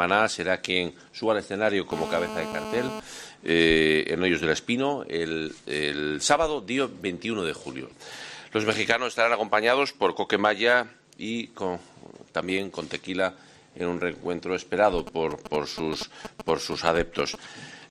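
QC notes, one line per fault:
1.92–3.00 s, GSM phone buzz: a hard, raspy buzz at 217 Hz with a dense stack of harmonics sits about 8 dB below the programme and has no relation to it. A 2G handset in a call nearby transmits in bursts at that rate, and some stage in the audio chain rectifies the RF pulses into a square-edged audio tone. Because the phone is in a call state, the buzz holds steady for the full second before cutting off.
14.98–17.36 s, GSM signalling bursts: a galloping dit-dit-dit pattern of brief 217 Hz buzzes, roughly 10 dB under the signal, running for just over two seconds. Here the handset sends only short groups of radio bursts, as it does while setting up a call or receiving a message, so the rectified interference arrives in clusters rather than as a continuous tone, which gives it the irregular, stuttering rhythm.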